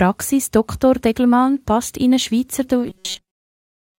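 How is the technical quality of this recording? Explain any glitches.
The recording has one glitch, in its final second. Robotic sound from repeated short buffers runs from 2.89 s to the end. New audio likely arrived too slowly, so fragments of about 5.3 ms were replayed in place of most of the missing material. This imposes a fixed 188 Hz metallic buzz.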